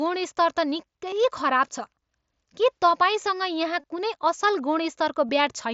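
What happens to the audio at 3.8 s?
Concealed Bluetooth headset packet loss from 3.81 to 3.84 s. About 22 ms of audio went missing and was patched by repeating recent waveform, giving a brief buzzy tone.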